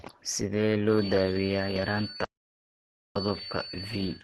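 Short speech clip, and the whole thing has that muffled, hoarse, grainy quality you get from Opus compression, likely run in its hybrid speech mode at a low rate around 16 kbps. Nothing comes through above about 12.2 kHz. From 0.85 s right to the end there's a feedback whistle, a thin steady tone at 4.5 kHz sitting well below the speech and wavering a bit, likely a speaker-to-mic loop hovering just at the edge of feedback. Then from 2.24 to 3.16 s there's an audio dropout to silence. The sound cuts out for about 0.92 s into dead silence with no room tone, likely the input getting lost through a disconnect, link failure or mute while the recorder kept writing. Whatever was said in that stretch is gone.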